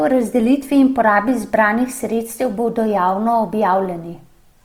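Across the whole speech clip there is plainly audible codec damage: tones sound grainy and rough, with a noisy texture laid over them, yet the treble is not cut off and there is little of the swirling, hollow character of MP3. That pattern points to Opus compression, likely in its CELT music mode at full bandwidth, where bands short of bits are refilled with folded spectrum or noise, consistent with a rate of roughly 24 kbps.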